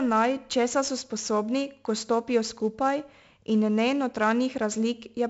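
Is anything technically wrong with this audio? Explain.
Yes, the speech has been through 4-bit ADPCM compression for its whole length. Each sample is coded as a coarse step from a prediction, so heavy, level-following grit rides on every loud syllable, attacks smear, and nothing survives above 7.7 kHz, which fits a 16 kHz, 64 kbps stream.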